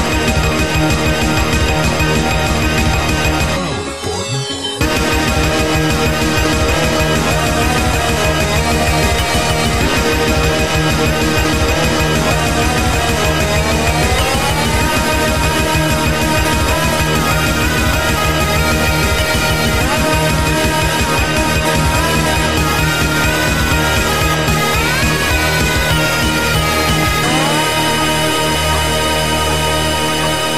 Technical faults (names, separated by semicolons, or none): USB whine